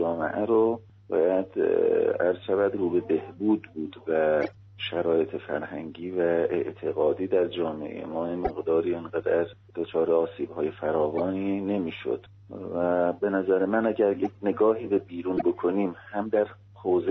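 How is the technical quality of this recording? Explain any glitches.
The recording has a recurring fault: corrupt frames decoded five times, at 4.42–4.55, 8.44–8.51, 11.18–11.20, 14.25–14.33 and 15.37–15.43 s. Damaged compressed data got played anyway, so misread values throw energy to the wrong frequencies. You hear short chirpy bursts peaking around -15 dBFS, with the 14.25 s one quieter at about -25 dBFS.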